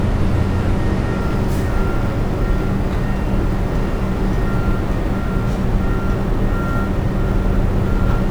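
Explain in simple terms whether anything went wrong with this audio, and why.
Something did go wrong, starting at about 1.21 seconds and lasting to the end. The fault is sample clock jitter. The timing clock in the converter wobbled, by a few millionths of a second. So each sample was taken a little early or late, at random. Those small timing slips turn into a faint hiss or roughness. It gets stronger when the sound is loud or bright, and it disappears when things go quiet.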